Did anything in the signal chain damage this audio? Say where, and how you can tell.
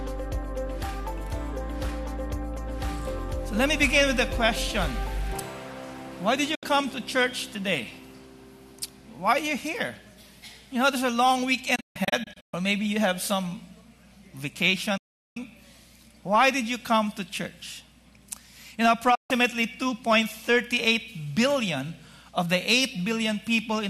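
Yes, digital broadcast dropout at reception. The sound fades to silence within about 8 ms at 6.55–6.63 s, 14.97–15.37 s and 19.15–19.31 s, with scattered holes across 11.75–12.54 s. The receiver muted on bad frames; gap lengths fit 24 ms frames.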